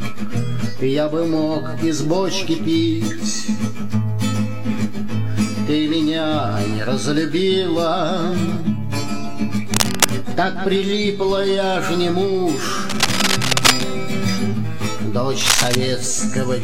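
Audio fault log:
9.63–10.11 s, 12.89–13.84 s, 15.41–15.77 s: cable scratch noise, dense irregular rustling bursts roughly as loud as the sound, likely from a worn connector being moved, unlike isolated clicks.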